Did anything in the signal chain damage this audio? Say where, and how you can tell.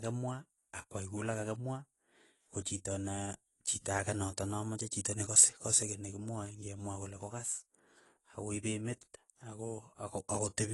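Yes, at the codec stage: the speech has been through what is likely low-rate AAC compression, consistent with AAC-LC at roughly 32 kbps. Nothing survives above 11.5 kHz for the whole clip, and coarse spectral quantisation leaves the voice dull and smeared, with a fizzy, warbling edge on sibilants.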